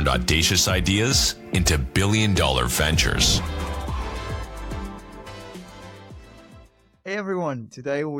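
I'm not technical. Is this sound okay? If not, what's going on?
Yes, no faults can be heard.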